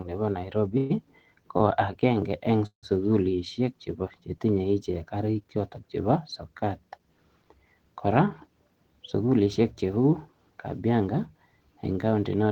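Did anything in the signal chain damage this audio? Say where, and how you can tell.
Yes, it's the network and jitter buffer. At 0.77 to 0.92 s and 2.66 to 2.85 s the sound smears into a fading buzz, then resumes where it stopped. The second one decays to about 100 ms of silence. These are call audio freezes, likely packets held up in transit, adding roughly 130 and 165 ms of delay.

At 1.58 to 1.62 s there's a short stall from a late packet. The last sound is held for about 23 ms with a slight buzz until the packet shows up, then playback carries on with nothing lost.

Then the receiver claws back that built-up delay with a jitter buffer speed-up. Between 8.75 and 10.05 s the audio runs about 8% fast, and between 10.73 and 11.14 s about 9% fast, at unchanged pitch. Tiny pitch-period slices are trimmed out, roughly a tenth and a twentieth of a second respectively, so it sounds rushed.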